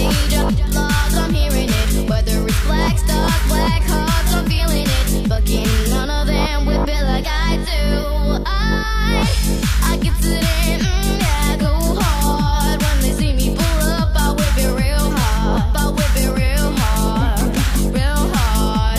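No technical faults can be heard anywhere in the audio.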